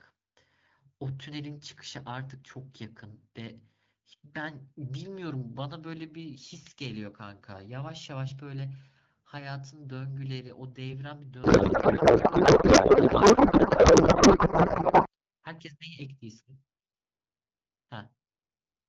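From 11.43 s to 15.08 s the speech gives way to a codec payload misread: garbled noise and warble that barely tracks the talker. The pattern fits octet-aligned AMR-WB frames being unpacked as bandwidth-efficient, so every field lands in the wrong place. Packet loss leaves brief gaps or smeared repeats, but this corruption is continuous for the whole span, then snaps back cleanly to the lightly coded wideband speech.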